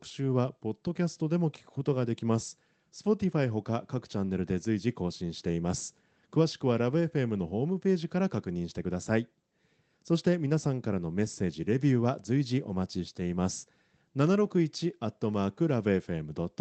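Nothing stood out on listening to this speech, which carries the expected character of an Opus call path with its top end limited to about 8 kHz.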